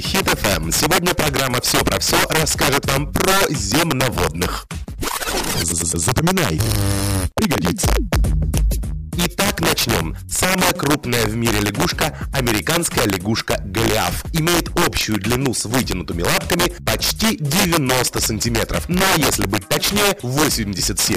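Integer overflow runs through the whole clip: a gain about 4 dB too hot pushes a small share of peaks, around 2 percent of samples, past the integer limit, where they wrap to the opposite sign instead of holding. Each loud moment cracks violently, far harsher than clipping. The waveform shows peaks snapping from one rail to the other, and the spectrogram shows bright full-band vertical streaks.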